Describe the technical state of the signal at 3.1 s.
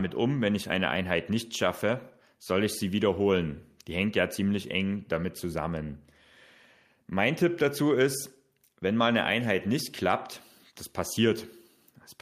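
At 3.1 s the signal is intact, with no audible technical fault at that moment.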